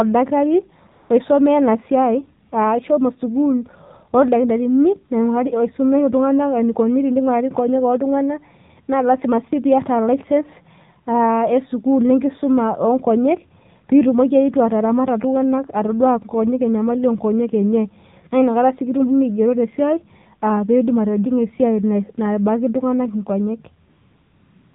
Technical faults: AMR narrowband mobile codec; AMR comfort noise

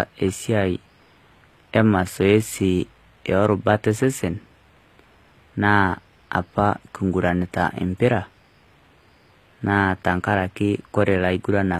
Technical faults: HE-AAC compression

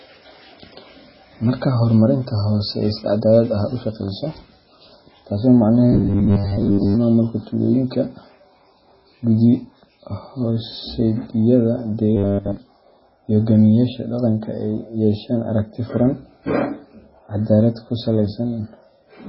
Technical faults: MP3 compression; robotic sound from repeated short buffers

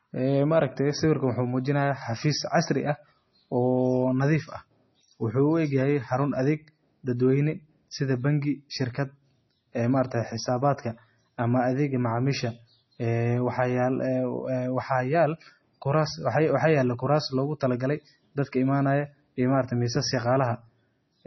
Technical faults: MP3 compression

